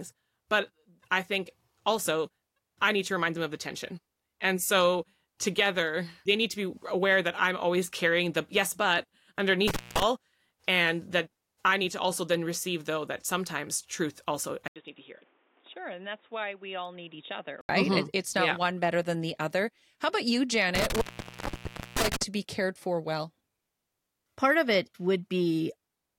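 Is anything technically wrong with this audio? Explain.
Yes, there are two kinds of fault in this speech.

Intermittent contact occurs twice: from 9.68 to 10.03 s, with the line open for about 196 ms, and from 20.75 to 22.22 s, just after "about you" and before "be cared for well", open for about 953 ms. A loose plug or cable breaks the connection for a moment, so the sound cuts out with crackle at the edges and hiss while the line is open. On a waveform each event is a collapse in amplitude bracketed by sharp spikes. A spectrogram shows broadband vertical clicks at the edges and only a low noise floor between them.

From 14.68 to 17.69 s, just after "sometimes truth also I", the sound turns dull and boxy, then clears again. This is likely an input switched to a poorer device, such as another microphone or a headset's call profile. That device passes a narrower band, with nothing above 3.8 kHz. 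The switch begins with an 80 ms silence, the level drops by roughly 10 dB, and a new noise floor appears about 30 dB below the speech. On a spectrogram the energy above 3.8 kHz is cut off sharply for that whole span. The waveform shows a brief gap followed by a visibly smaller envelope.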